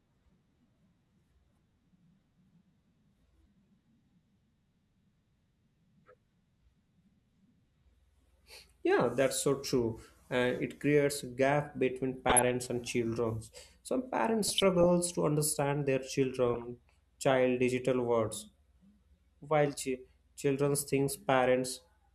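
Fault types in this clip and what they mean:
DAB burbling: at 12.29–12.48 s after "creates a gap between", 14.43–14.86 s before "to understand their", and 16.48–16.64 s before "child digital words", the speech burbles with short blips of noise as uncorrected bit errors, a fraction of a percent, corrupt MP2 scale factors and sub-band samples.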